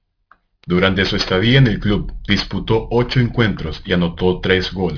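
Throughout the speech, sibilants sound gritty and metallic, with energy pressed hard against a ceiling near 5.5 kHz. This is aliasing: the audio was downsampled, which fits a rate of about 11 kHz, without an anti-alias filter, so higher content folds back as false tones roughly 20 dB below the speech.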